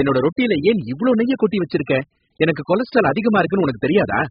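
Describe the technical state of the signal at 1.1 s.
An electrical switching spike at 1.14 s, right after "ரொட்டில ஏன் இவ்ளோ", is a sharp snap, likely a nearby switch or discharge arcing into the audio line. Heavy AAC compression, likely AAC-LC at about 8 kbps, also runs through this moment, with nothing above 5 kHz and a dull, smeared texture.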